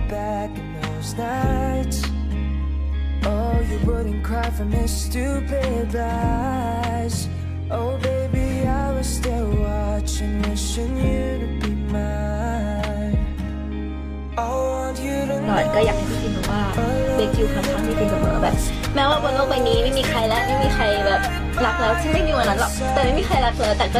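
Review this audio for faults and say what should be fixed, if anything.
From 22.77 s to the end of the clip there is a Bluetooth SBC bit pool drop. The treble suddenly dulls and a gritty, granular noise rises under the sound, which fits the encoder's bit pool falling from 31 to 16 and points to a rate near 110 kbps. With so few bits, the top sub-bands get little or nothing and the rest are coarsely quantised. On a spectrogram, the upper frequencies go dark abruptly at 22.77 s while speckled noise fills the lower bands. The waveform's envelope barely changes.

To prevent it, reduce radio congestion, or record locally or over a wired path so the link never has to trade bit pool for continuity.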